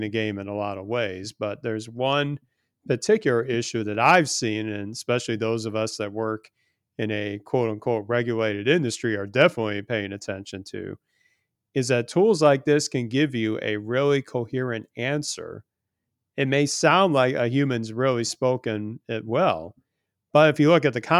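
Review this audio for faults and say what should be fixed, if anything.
No faults; nothing needs fixing.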